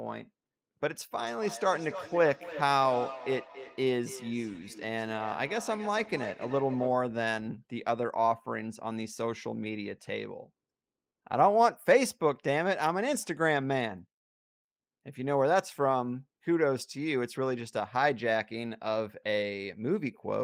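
From 1.2 to 7.1 s the speech carries a feedback echo between two devices: each word returns roughly a third of a second later, peaking at about 13 dB below the speech. Two devices in the same room share the call, so one replays what the other's microphone captured, and that microphone hears it again. Neither echo canceller removes the other device's output. Room reverberation would instead smear the sound without a distinct, regularly spaced repeat.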